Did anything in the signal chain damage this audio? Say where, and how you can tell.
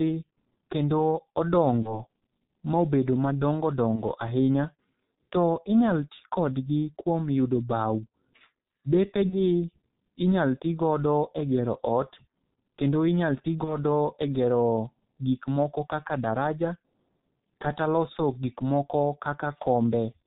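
Yes. At the codec stage, the whole clip carries heavy G.723.1 codec damage. The speech is muffled and hoarse with smeared consonants, and nothing reaches above 4 kHz, as expected of this narrowband codec, here running at 6.3 kbit/s. Because it is constant rather than gradual, it is not network-driven bitrate switching.

At the network stage, VoIP packet loss concealed by the speech codec occurs at 1.82–2.02 s, 3.95–4.01 s, 9.29–9.41 s and 13.64–13.78 s. Each gap fits one lost 30 ms frame, filled with a fading extrapolation that leaves the speech weak briefly afterward. Plain dropouts would be silent and immediate instead.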